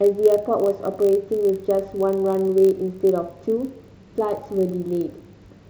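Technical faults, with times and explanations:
Throughout: block size mismatch (padded). A steady low buzz at 46.9 Hz runs under the speech, while pitch stays normal and pacing is almost unchanged, only about 0.1% slow. The buzz rate fits a 1024-sample read block. One stage delivers blocks very slightly shorter than the next stage reads, and the remainder of each block is filled with zeros. Those tiny silent gaps recur once per block, producing the buzz and the minimal slowdown.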